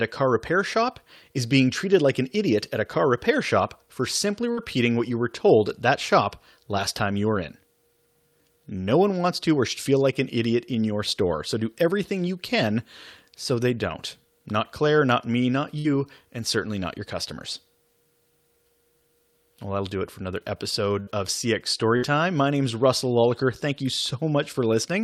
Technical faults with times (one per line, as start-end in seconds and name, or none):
15.79-15.87 burst of packet loss
21.00-21.10 burst of packet loss
21.97-22.05 burst of packet loss